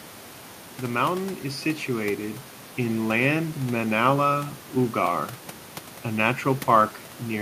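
The speech signal shows no technical faults, with only the room's own background noise sitting about 20 dB below the voice as part of the recording.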